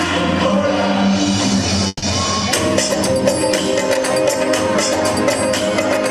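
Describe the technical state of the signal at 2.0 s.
At 2.0 s the sound is stretched into a fading buzz, ending in a brief silence of about 20 ms before resuming where it stopped. This is a call audio freeze from 1.87 to 2.04 s, likely late packets draining the jitter buffer; about 150 ms was filled in and nothing lost, so everything after plays 150 ms later.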